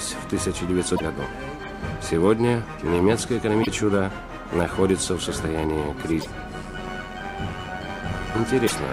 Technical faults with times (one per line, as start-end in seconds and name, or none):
0.93-1.01 damaged data in a compressed stream
3.59-3.68 damaged data in a compressed stream
6.18-6.26 damaged data in a compressed stream
6.54-8.34 overlap-add ripple
8.63-8.72 damaged data in a compressed stream